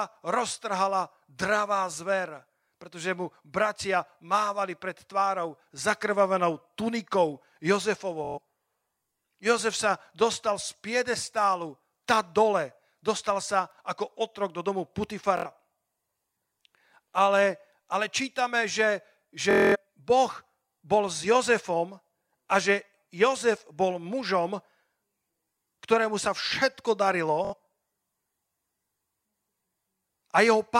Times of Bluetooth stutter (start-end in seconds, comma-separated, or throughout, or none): 8.24-8.38, 15.37-15.46, 19.51-19.76, 27.45-27.54